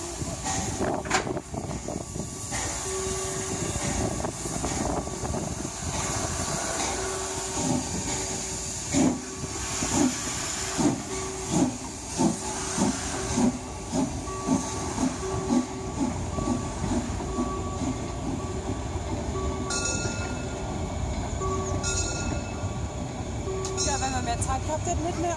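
No faults are audible anywhere in the clip: no dropouts, glitches, level jumps or distortion events turn up at any point.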